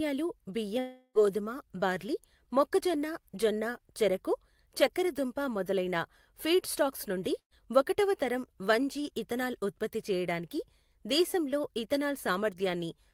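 From 0.79 to 1.18 s the speech was cut off, most likely by a long network dropout. About 360 ms of audio never arrived, so the receiver stretched the last sound into a fading buzz or hiss before a short silence, and the speech resumes with that stretch missing.

At 7.39 to 7.54 s a burst of packet loss removed about 120 ms of speech. The receiver filled the gap by repeating the last sound and turning it down, giving a brief held buzz or fading hiss before the speech picks up further on.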